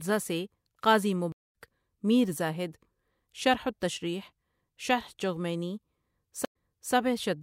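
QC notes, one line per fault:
1.32–1.54 s, stream reconnect: the speech drops out for 216 ms, then picks up about a third of a second further on, so a bit is simply skipped. The player lost the connection, reconnected mid-stream and started a fresh decoder, which mutes or fades in its first frame or two.
6.45–6.94 s, stream reconnect: a shorter 97 ms gap, but this time the speech comes back 392 ms earlier, so you hear a chunk repeated. The server resent a burst after the reconnect, and the new decoder eases in over its first frames.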